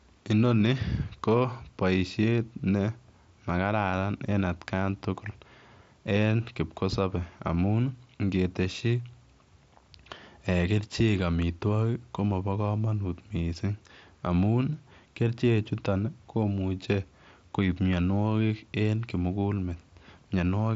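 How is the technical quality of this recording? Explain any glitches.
No glitches or faults turn up anywhere in this speech recording. It has the character of a Bluetooth headset link using the mSBC codec, with the sound band-limited to about 7.7 kHz and only light coding coloration.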